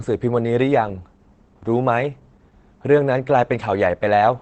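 Throughout, Opus voice compression in SILK mode codes the speech coarsely, making it plainly muffled, hoarse and slightly robotic, which fits a bitrate around 12 kbps.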